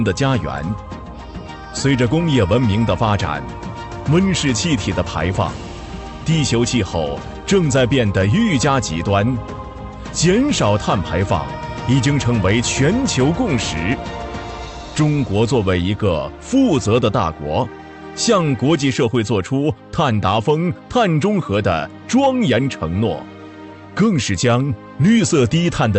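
Hard clipping runs through the whole clip. The signal drives a stage about 4 dB past what it can pass, so the highest peaks are sliced flat. Only a small fraction of samples, around half a percent, exceed the limit, so the damage is confined to the loudest moments, where a brief crackle and gritty edge appear. The flattened tops generate harmonics high in the spectrum. The call codec's upper limit sits near 8 kHz.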